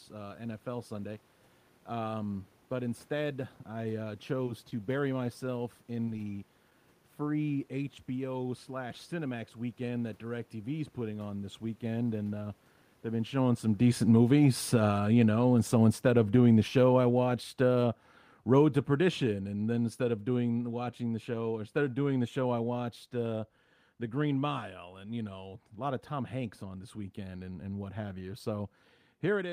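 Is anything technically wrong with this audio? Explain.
Yes, two kinds of fault are audible in this speech.

Short concealed packet loss occurs at 4.45 s, just after "but instead I uh", then at 6.05 s after "bury myself", and at 6.16, 6.30 and 6.70 s. Each time about 10 ms of audio failed to arrive. The receiver extended the preceding sound to fill the gap, then faded back. Each one is heard as a tiny smear or wobble.

Automatic gain falling runs from 12.0 s, after "is putting on this", to 24.6 s, before "and you know a". The gain control judged the input too loud, or its background noise too strong, and lowered it gradually by about 18 dB. Speech and background sink together. A talker movement near 13 s overlaps the start.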